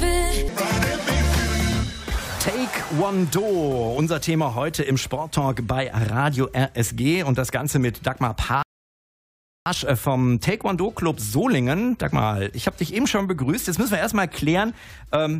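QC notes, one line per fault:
8.63–9.66 s, rebuffering stall: the audio drops to dead silence for about 1.03 s, then picks up at exactly the point where it broke off, so nothing is skipped but the clip runs that much longer. The player exhausted its downloaded data and waited for more before continuing. On a waveform this is a flat line with abrupt edges; on a spectrogram, a clean vertical gap of empty bins across all frequencies, with content on either side matching seamlessly.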